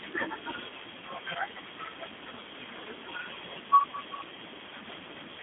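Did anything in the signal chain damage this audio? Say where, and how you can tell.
Yes. At the codec stage, G.729 coding runs throughout: the speech is confined to about 250 Hz to 3.5 kHz, with a rough, synthetic texture typical of 8 kbit/s model-based coding.

At the network stage, VoIP packet loss concealed by the speech codec occurs at 1.33 to 1.38 s and 3.91 to 3.96 s. About 20 ms goes missing each time, consistent with one lost packet, and the decoder fills the gap with a fading extrapolation of its last pitch and filter.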